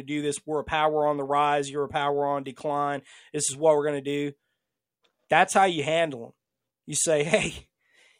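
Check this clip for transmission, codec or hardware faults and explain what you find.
Nothing here needs flagging: the speech comes across steady and intact, with no transmission, codec or hardware trouble to point to anywhere along the way.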